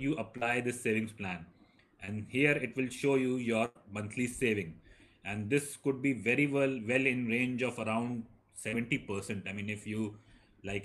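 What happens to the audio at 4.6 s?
Nothing goes wrong at 4.6 s; the audio plays through that moment intact, with no dropout, click or distortion.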